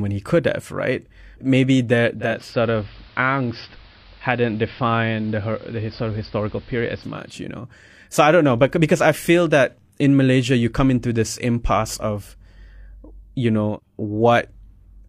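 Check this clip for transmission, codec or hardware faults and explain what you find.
One fault is present: digital radio blending to analogue, from 2.13 to 7.43 s. The receiver lost the digital stream and cross-faded over 415 ms to the AM broadcast, then back. The speech turns dull. It drops about 1 dB, and hiss sits roughly 30 dB below it.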